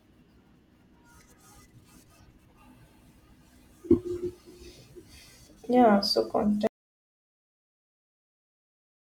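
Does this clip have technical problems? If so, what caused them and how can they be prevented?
Yes, there's an audio dropout to silence at 6.67 s. The speech cuts off to silence with no room tone through the end, likely a lost input. Secure cables and monitor the input live while recording.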